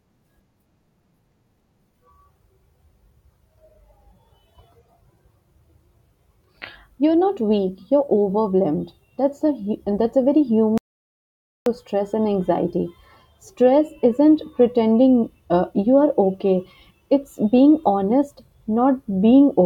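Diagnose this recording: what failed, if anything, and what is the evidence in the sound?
An audio dropout to silence hits the speech from 10.78 s to 11.66 s, right after "that's a very", with the sound resuming at "stress and anxiety". For about 0.89 s the signal drops to silence, with no room tone or noise floor, and whatever was said is simply gone. The fault is at the input stage, most likely a lost capture device or link, with the recorder still writing samples. A noise gate would not cut speech off mid-phrase, and network loss concealment would fill the gap with smeared sound.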